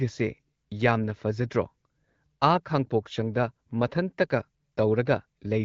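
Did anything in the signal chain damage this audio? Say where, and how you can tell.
No, nothing in the signal chain damaged this audio; the AMR wideband (HD Voice) path at 12.65 kbit/s is working as intended.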